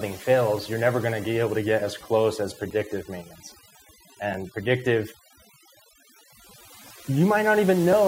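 Throughout the speech there is overdone noise removal. The noise reduction was set so aggressively that individual frequency bands near its noise estimate are pushed down to nothing, and the quieter parts of the voice are removed with them. The background becomes an unnatural near-silence flecked with twinkling, chirpy specks. Unlike a simple low-pass or band-limited sound, the damage shifts from moment to moment as bands flicker on and off.

At 2.70 s, just after "get as close as", and again at 4.34 s, a block of digital silence cuts in. Each dropout lasts about 5 ms, which fits a 256-sample output buffer that was not filled in time. The signal drops straight out and returns with no fade, and each gap is heard as a sharp tick rather than an audible hole. That hard edge, and the silence inside it, sets it apart from a momentary dip in level.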